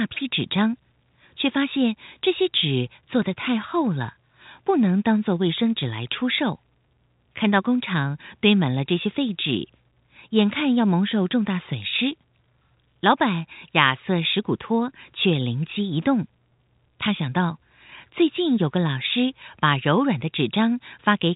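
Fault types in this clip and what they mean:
No fault can be heard in the clip. The speech carries the narrow telephone band of G.711 coding, with nothing above about 3.8 kHz.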